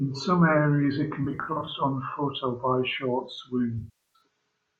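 Between 1.24 and 1.71 s the speech breaks up in short, scattered patches, roughly 0.23 s of missing audio spread over about 0.43 s, with no single gap much past a few tens of milliseconds. This is AAC frame loss with concealment: the decoder rebuilds lost frames from the last good spectrum, so the gaps sound smeared, noisy and phasey rather than silent. That fill is what distinguishes it from a plain dropout. A second loss runs from 3.78 to 4.21 s.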